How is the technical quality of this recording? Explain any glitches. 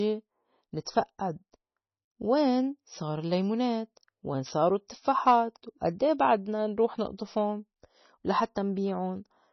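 Pretty rough, honestly, with heavy codec damage across the whole speech clip. From start to finish the treble stops dead at 6 kHz, and the sound has that watery, swirly texture, with sibilants turning metallic. That's most likely MP3 compression starved of bits, which fits a rate around 24 kbps: the encoder chops the top end and drops quiet frequency lines, which then flicker frame to frame.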